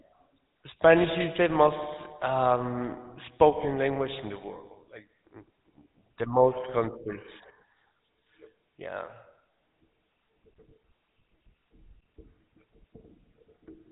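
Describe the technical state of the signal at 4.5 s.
At 4.5 s, like the whole clip, the speech has GSM full-rate codec damage: pulse-driven vocal-tract modelling leaves a clearly buzzy, gravelly roughness, nothing above 3.8 kHz, consistent with 13 kbps.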